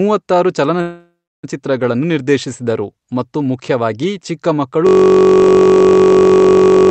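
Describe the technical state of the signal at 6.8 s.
At 6.8 s you're inside a system hang loop running from 4.87 s after "ಮತ್ತು ಮುಖ್ಯವಾಗಿ ಚಿಕ್ಕ ಮಕ್ಕಳು" to the end: a frozen 21.33 ms buffer, likely 1024 samples, repeating as a steady 46.9 Hz buzz.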